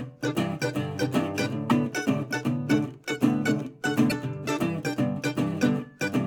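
A music clip with two short bursts of damaged data in a compressed stream, at 1.66 to 1.72 s and again at 4.06 to 4.12 s, each lasting about 55 ms. Both are heard as a brief disturbance in the music. Corrupted bytes in the encoded stream leave the decoder unable to read those frames correctly, so it loses sync and emits garbage until it locks onto the next valid frame header.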